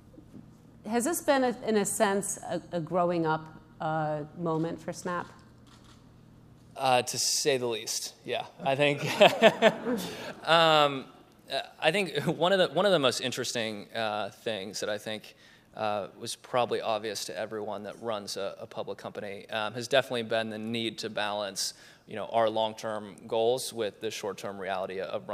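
No technical faults are audible.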